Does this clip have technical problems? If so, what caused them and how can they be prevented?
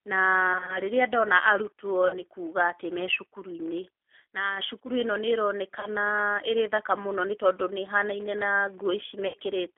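Yes. A filter restarted on every block produces a 100 Hz buzz throughout the speech. The filter starts each block from silence, so every block opens with a small tick. That rate fits a 10 ms block. Prevent it by carrying the filter's state from one block to the next.

G.729 codec damage is plainly audible throughout. The band is limited to roughly 200 Hz to 3.6 kHz, and the speech sounds rough and synthetic, as expected from a low-rate model-based coder, likely G.729A at 8 kbit/s. Prevent it by using a wideband codec such as Opus where the link allows.

VoIP packet loss concealed by the speech codec occurs at 0.54 to 0.79 s before "rĩrĩa ndona", at 2.08 to 2.21 s before "kuga atĩ me", at 5.80 to 5.87 s after "cukuru ĩno nĩ", and at 9.27 to 9.36 s. In each case the decoder stretches the last sound into a fading buzzy tone or coloured noise. Prevent it with a larger jitter buffer, forward error correction or a more reliable network path.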